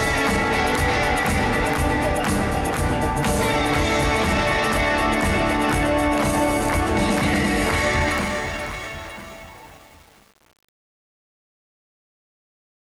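From 8.02 s to the end at 12.93 s, the fade shows truncation distortion on a fade. The digital gain stage keeps too few bits and applies no dither. As the level drops toward the smallest step, the waveform collapses into a few square steps. The step size fits a 7-bit signal. From 8.25 s to the end, the quiet tail sounds gritty instead of smoothly fading away.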